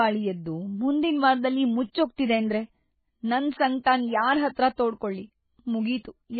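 MP3 compression throughout: the encoder likely starved of bits, around 16 kbps, cut all treble above 4.5 kHz and zeroed weak lines, leaving speech dull, watery and swirly.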